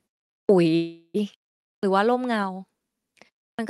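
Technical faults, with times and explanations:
0.44 s, 1.78 s and 3.54 s, clipped start after a pause: after silences of about 0.44 s, 0.51 s and 0.32 s, the first 46 to 51 ms of sound is swallowed while the output device wakes from idle and relocks, so each onset begins abruptly, missing its opening.
0.75 to 1.16 s, call audio freeze: the sound stalls for 390 ms, continuing the last sound as a fading buzz or hiss that ends in about 40 ms of silence, then resumes where it stopped. This is likely a jitter buffer running empty while packets were delayed. Nothing is lost, but everything after is 390 ms later.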